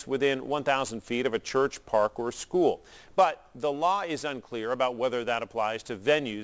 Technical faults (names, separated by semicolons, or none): aliasing